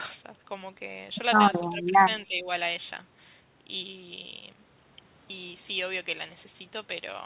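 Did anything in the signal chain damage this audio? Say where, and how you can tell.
Yes. The damage happened in call processing. The speech dips twice, from 1.69 to 1.93 s and from 2.27 to 2.48 s. The level drops by roughly 15 dB and then roughly 10 dB, each time for around a fifth of a second. The likely cause is speech suppressed in double talk. The echo canceller could not tell the near talker from loudspeaker echo while both sides spoke, so it attenuated everything. The G.711 path's 4 kHz ceiling is heard throughout, not just at these points.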